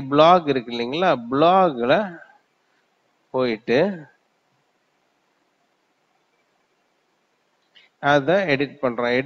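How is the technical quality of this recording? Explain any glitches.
No glitches can be heard, so there is nothing to explain about the technical quality of this recording.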